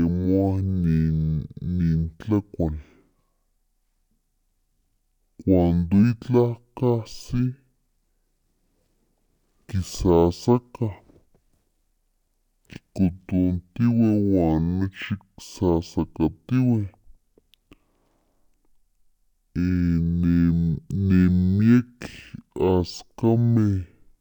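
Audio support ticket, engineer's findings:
Stereo read as mono, entire clip. Speech at half speed, pitched a full octave low (-12 semitones), with a fainter mirrored copy in the upper spectrum. Probable component: decoder or playback channel-count config. Interleaved left/right samples consumed sequentially as one channel, so each stereo frame becomes two mono samples, doubling the duration and halving the pitch.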